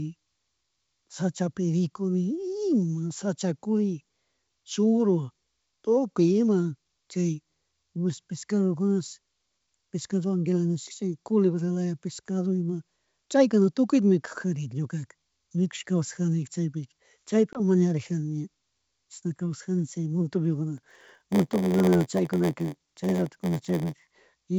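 Packet loss on an ADPCM call appears at 17.53 to 17.60 s. About 20 ms of the speech, roughly a couple of packets' worth, drops out into a hard-edged silent hole. Because ADPCM codes each sample relative to a running prediction and step size, the receiver's decoder loses track of the sender's state across the gap. When sound resumes it comes back slightly distorted until the decoder re-converges.

A block size mismatch with zero padding runs from 20.76 to 24.11 s. An upstream stage delivers blocks shorter than the downstream stage reads, which fits a 512-sample read block, and the shortfall in each block is filled with zeros. The resulting tiny gap in every block produces a steady buzz at about 86.1 Hz. The speech also plays slightly slow, at about 0.938 times normal speed, while its timbre stays.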